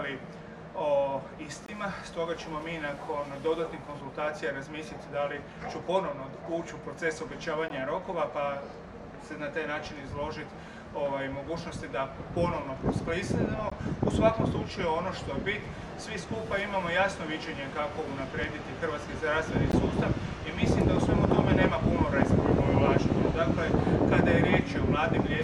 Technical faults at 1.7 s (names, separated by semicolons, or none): gap at a join of encoded pieces